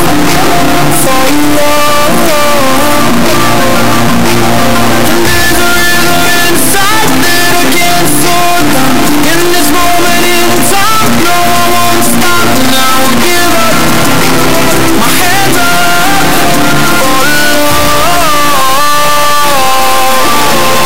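The audio suffers from integer read as float throughout. It plays as an extremely loud, buzzing square wave. The output slams between silence and clipping at the converter's limit, going silent in the quietest passages. This points to 32-bit integer samples being decoded as 32-bit floats.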